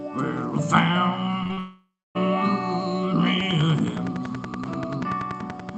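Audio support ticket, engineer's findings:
Short concealed packet loss, 1.43–1.47 s, 1.47–1.51 s, 1.53–1.59 s. Brief smears and wobbles, three in quick succession. Jitter buffer and decoder. Packets missing for 20 to 40 ms each. Receiver extended the last sound to cover each gap, then blended back into real audio.

Long network dropout, 1.59–2.17 s. Concealment carries on as a fading buzz or hiss. It then decays to silence for roughly the last quarter second. Audio resumes at 2.17 s with the missing stretch gone. Likely a network outage of about 0.56 s, masked by the decoder until concealment ran out. Follows straight on from the short losses above.

Train of clicks, 3.40 s to end of clip. Regular ticking at 10.5 per second. Peaks about 10 dB above the audio, audible in pauses too. Likely interference from nearby equipment or a faulty connection or power supply injecting pulses. Same click shape each time. 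Top end stops near 8 kHz, which fits the Opus call path.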